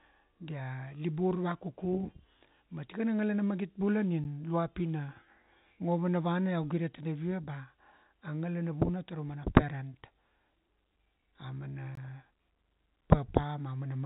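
At 4.24 s and again at 11.95 s the speech drops into a block of digital silence, about 10 ms and then 20 ms of silence, most likely from an output buffer left unfilled. Each cuts in and out abruptly, the first heard as a tick and the second as a short hole rather than a smeared, faded gap. The telephone-band G.711 sound, with nothing above 3.8 kHz, continues up to each gap.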